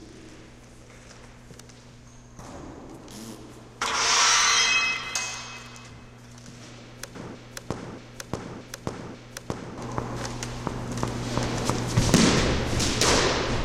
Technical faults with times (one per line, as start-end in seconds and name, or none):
2.46 dropped buffer (overrun)
4.97 dropped buffer (overrun)
5.90 dropped buffer (overrun)
7.15 dropped buffer (overrun)
7.35-9.78 broken-record loop
8.68 dropped buffer (overrun)
11.56 dropped buffer (overrun)